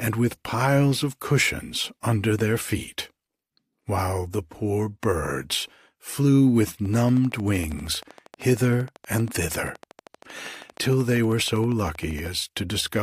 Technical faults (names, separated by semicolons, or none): train of clicks